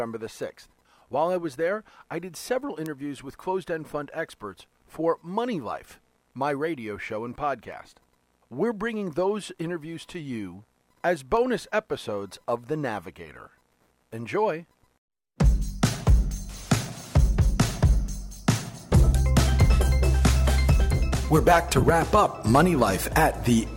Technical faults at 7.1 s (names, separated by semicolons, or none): word clock ticks